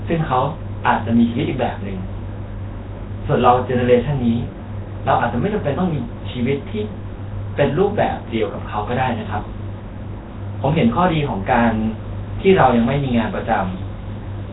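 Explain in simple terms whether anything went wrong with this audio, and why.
The speech sounds rough, hissy and underwater throughout, with nothing above 3.9 kHz. The likely cause is heavy Nellymoser compression, which replaces weak frequency bands with noise.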